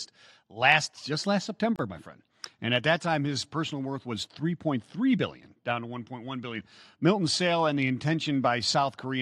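At 1.76 s, between "last just last" and "my friend", a gap at a join of encoded pieces opens for about 30 ms. Two separately encoded segments were spliced untrimmed, leaving encoder start delay and final-frame padding in place, so the speech briefly drops out, then resumes where it stopped.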